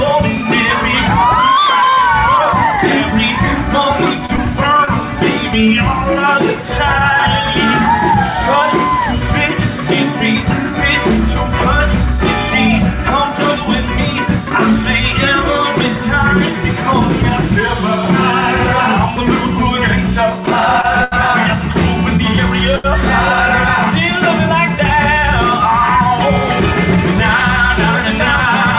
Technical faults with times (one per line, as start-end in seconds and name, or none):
4.26-5.03 repeated packet loss (robotic sound)
20.81-21.14 short stall from a late packet
22.76-22.86 short stall from a late packet